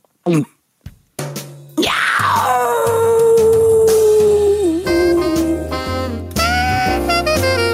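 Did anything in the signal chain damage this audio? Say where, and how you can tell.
No, nothing along the signal chain audibly damaged this audio; every stage from capture to playback leaves the signal intact.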